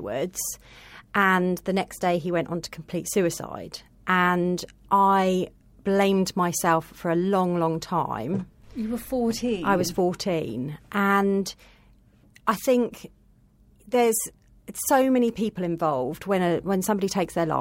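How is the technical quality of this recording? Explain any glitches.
Nothing here to flag: I listened all the way through this speech recording and didn't hear a single glitch.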